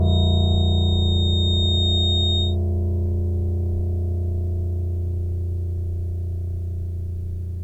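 From the very start of the music until about 2.57 s there's a feedback whistle, a thin, steady tone near 3.7 kHz sitting only a few decibels under the music and swelling and fading slowly in level. It sounds like the loop between a loudspeaker and the microphone picking it up was likely riding right on the edge of feedback, so that one frequency kept ringing on without ever building up into a howl.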